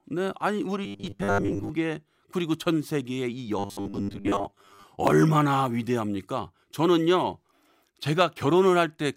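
Audio likely reached the playback side too seldom, so the software kept refilling the gap by repeating its last short buffer while most of the real signal was skipped. That loop imposes a fixed 100 Hz pitch, which fits a buffer of about 10 ms. The result is robotic sound from repeated short buffers from 0.84 to 1.69 s and again from 3.59 to 4.84 s: a rigid, metallic buzz that only loosely tracks the speech.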